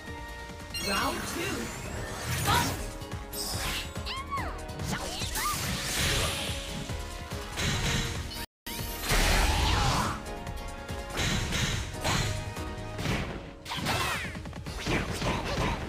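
The audio stops dead at 8.45 s and stays silent for about 0.22 s before resuming at 8.67 s. This is a playback stall, most likely the player running short of data or its output thread being blocked until it caught up. It differs from a dropout or packet loss, which are usually much shorter or leave concealment noise. Here the gap is clean silence of a noticeable length, as if the sound were paused and then released. From 12.64 s to the end, the sound turns dull and muffled, which points to de-emphasis applied wrongly. A treble cut intended to reverse pre-emphasis has been applied to material that did not need it, leaving 10 kHz about 8 dB down relative to 1 kHz. What separates this from an ordinary low-pass filter is the shape of the loss. The highs sag along a smooth, gradual slope rather than stopping at a sharp cut-off frequency, so the top end is subdued but not removed.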